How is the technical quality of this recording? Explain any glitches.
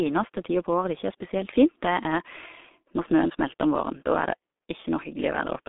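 The quality is poor throughout, because of a G.723.1 codec. Its coarse, roughly 6 kbit/s coding discards everything above 3.8 kHz and keeps only 250 Hz to 3.6 kHz, leaving speech muffled, hoarse and smeared.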